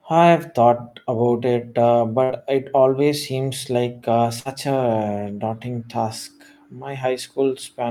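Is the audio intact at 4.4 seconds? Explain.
No. A burst of packet loss runs from 4.39 to 4.48 s. About 60 ms of the speech never arrived. The receiver stretched the last sound over roughly 58 ms, fading it into a held buzz or hiss. The speech then resumes, skipping the lost portion.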